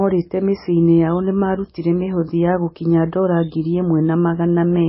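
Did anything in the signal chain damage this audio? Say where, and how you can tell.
Yes. MP3 compression damage runs through the whole speech clip, and the stage is the codec. Nothing survives above 5.6 kHz, so the treble stops at a hard ceiling, and the heavy watery, swirling texture comes from weak frequency lines dropping in and out between frames as the encoder runs out of bits. That starvation points to a very low bitrate, around 17 kbps, likely from a lossy MP3 encode.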